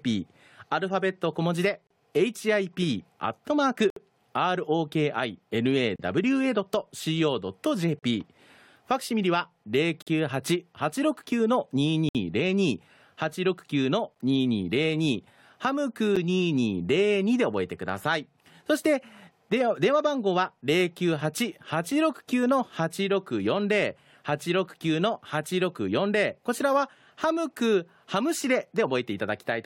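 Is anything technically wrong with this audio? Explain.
Yes. The speech breaks into brief, hard-edged holes of dead silence roughly every 2 s, at 1.87, 3.90, 5.96, 7.99, 10.02, 12.09, 14.15 and 16.16 s, each 9 to 62 ms long. This is a gap between stream segments: the timestamps of adjacent 2 s segments don't quite meet, so the player fills the mismatch with silence. Time is added, but no audio is lost.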